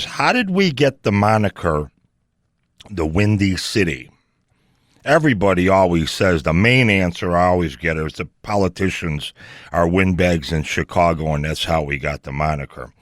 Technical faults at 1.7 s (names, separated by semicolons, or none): none